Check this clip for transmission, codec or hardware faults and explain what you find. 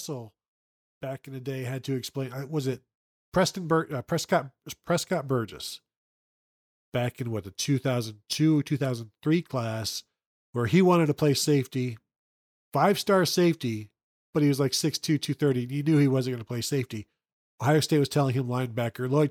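One fault shows up here, an automatic gain rise. From 1.01 s to 9.88 s the speech and the background noise around it swell together, climbing steadily by about 11 dB over nearly nine seconds. Because the room noise and the speech rise in step, this is the recording level changing rather than the talker getting louder. An automatic gain control judged the input too quiet and kept raising its gain slowly.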